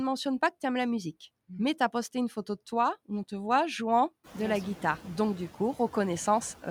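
Noise suppressor artifacts run through the whole speech clip. The suppressor treats steady background as noise and pulls it down by about 14 dB, band by band and frame by frame. The background dips in pauses and swells back under speech, a smooth spectral breathing rather than a gate's abrupt on/off. The room noise itself jumps by about 16 dB around 4 s, yet still sits about 19 dB below the speech.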